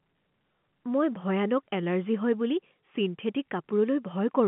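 No faults present; the speech sits on a G.711 A-law telephone channel at 64 kbps, band-limited to 150 Hz to 3.4 kHz with nothing above 3.8 kHz.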